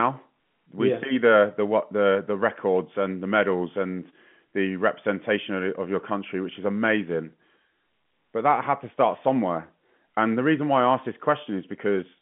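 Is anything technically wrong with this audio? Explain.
No, nothing's wrong here; it's ordinary telephone-band speech carried by G.711 A-law coding, so the narrow roughly 150 Hz to 3.4 kHz range you hear is just how a phone line sounds, not a problem.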